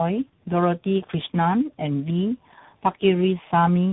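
From start to finish the speech carries tandem speech coding: it sounds like a low-rate AMR-NB leg then CVSD, each coder re-chewing the last one's damage, so it's rough, muffled and warbly, with nothing above 3.8 kHz.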